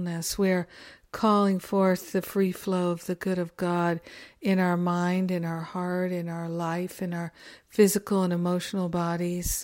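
No technical faults are audible anywhere in the recording.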